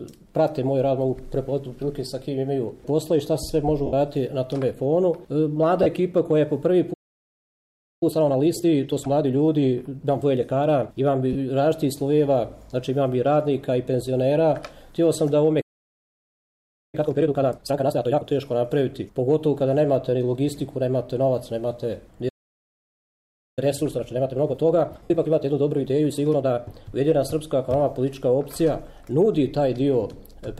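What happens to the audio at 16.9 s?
At 16.95 s the playback stall that began at 15.61 s ends. The sound had stopped mid-flow for about 1.3 s, most likely because the player ran dry of data. Unlike a brief dropout, the silence is long.

From 16.95 to 18.25 s, time-compressed catch-up follows as the player clears its backlog by trimming and cross-fading small slices. The audio runs at twice normal speed, but its pitch stays normal, which is what separates it from simply playing too fast.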